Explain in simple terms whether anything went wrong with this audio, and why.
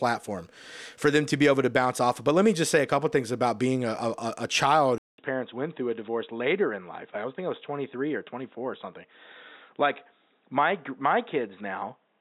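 Input switched to a poorer device at 4.98 s, just after "a a a child", and it lasts to the end. After a 0.2-second gap, the speech turns dull and boxy, with nothing above 3.8 kHz. The likely cause is recording switching to a lower-quality microphone.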